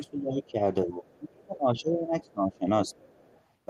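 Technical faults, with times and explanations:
0.00–0.59 s and 0.85–2.95 s, speech suppressed in double talk: the voice gets pushed down twice, by around 20 dB in the first stretch and around 25 dB in the second, covering roughly half a second and then roughly two seconds. The likely cause is the echo canceller hearing loudspeaker playback at the same moment this talker is speaking, failing to tell the two apart, and turning everything down, so this side's speech gets caught along with the echo.
3.00–3.42 s, other side's voice leaking through: a second voice slips in under the talker at around 30 dB below the main speech. The device is playing the far end out of its loudspeaker, and the mic picks it back up. The echo canceller most likely didn't fully scrub that pickup, so the leftover reaches the recording.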